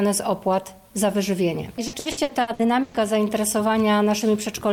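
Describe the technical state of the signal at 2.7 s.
Choppy, with pieces of the sound missing: 2.7 s falls inside a stretch of repeated packet loss (robotic sound) running from about 1.87 s to 2.98 s. Over that span the stream lost or received packets late seven times, the longest hole lasting 120 ms. Each gap was filled by extending the last sound received, about 480 ms in all, so nearly half the stretch is patched rather than real audio.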